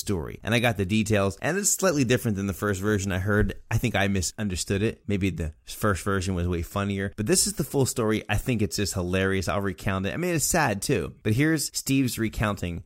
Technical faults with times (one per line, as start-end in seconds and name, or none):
none